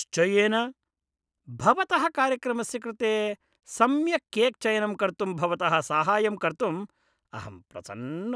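No technical faults can be heard anywhere in the recording, and the speech signal holds steady throughout.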